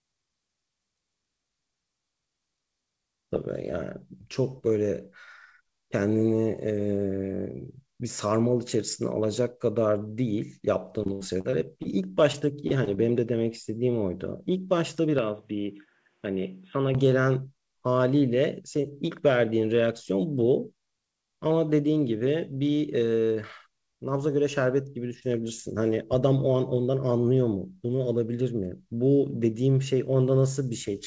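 From 11.04 to 11.86 s the audio breaks up with repeated packet loss, producing a choppy, robotic sound. Six separate holes open in under a second, the longest about 74 ms, and each is patched by stretching the preceding sound, so roughly a fifth of that span is synthetic fill. A milder recurrence follows from 12.32 to 12.99 s, with four shorter gaps of up to 30 ms and about 13% of the span concealed.

Between 15.19 and 16.95 s the sound abruptly turns duller and drops by around 5 dB. Content above 3.8 kHz disappears, narrower than the roughly 8 kHz band of the surrounding G.722-coded audio. A new, faint noise floor also appears, well below the signal. There is no silent gap at the transition. This tonal and level shift is likely the input being switched to a poorer device, such as a different microphone or a headset running in call mode.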